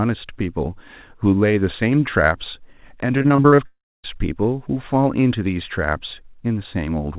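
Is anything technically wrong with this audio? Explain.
Yes. From 3.18 to 3.60 s the speech breaks up into a choppy sound. This is repeated packet loss. Seven short holes open in quick succession, the longest about 39 ms. Each one is patched by stretching the sound just before it. About 38 percent of that stretch is filled this way, so the voice turns choppy and pieces drop out.

Right after, from 3.66 to 4.06 s, the audio cuts out for about 0.4 s. The last sound carries on briefly as a fading buzz, then goes silent for roughly a quarter of a second before the speech returns with that part missing. A long network dropout is the likely cause. The call path's narrow band, with nothing above 4 kHz, is audible throughout, as expected from G.711.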